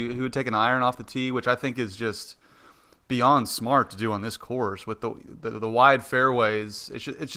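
Nothing stood out as a technical fault on listening to this speech clip.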